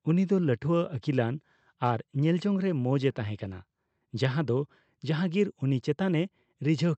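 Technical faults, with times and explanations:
No technical faults are audible in this speech, which has passed through a WebRTC call path whose Opus coding limits the audio to 8 kHz.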